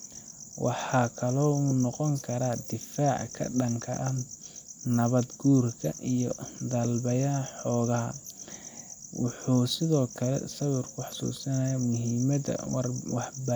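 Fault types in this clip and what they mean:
No faults detected in this recording.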